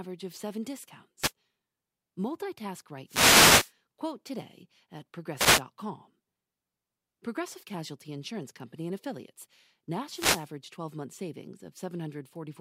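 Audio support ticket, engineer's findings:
Wireless microphone noise hits at 1.20–1.32 s (after "of seven"), 3.06–3.73 s, 5.35–5.62 s (after "today at") and 10.06–10.50 s: short static swishes covering the speech. Analogue FM radio link fading as reflections cancel; receiver noise rises and breaks through.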